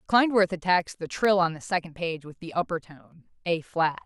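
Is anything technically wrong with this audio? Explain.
Yes. Between 0.81 and 1.25 s the speech carries CD scratch ticks: four short ticks, the longest under a couple of milliseconds, spaced evenly at roughly seven per second. A blemish on the disc wipes out more data than error correction can rebuild once per revolution, so the player conceals those samples and leaves a tiny tick. Random clicks from other faults would be irregular. Here the steady, rotation-locked spacing gives the scratch away.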